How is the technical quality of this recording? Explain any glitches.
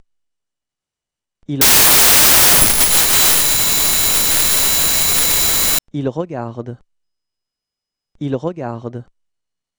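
One fault spoils the middle. From 1.61 to 5.79 s, a wrong sample width turns it into loud noise. The 32-bit samples were read as packed 24-bit, so the original plays buried, slowed to 0.75 speed and lower in pitch.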